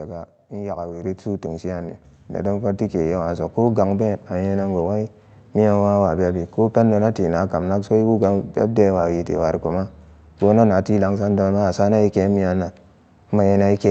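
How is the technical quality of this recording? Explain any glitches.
The recording has two sudden level jumps early on. At 1.02 s and again at 2.04 s, the microphone volume stepped up. The call software judged the input too quiet and raised the device's input gain in single steps. The first step was about 6 dB and the second about 3 dB. Voice and background rise together, so the whole sound gets abruptly louder. The audio passed through a call codec that tops out near 8 kHz.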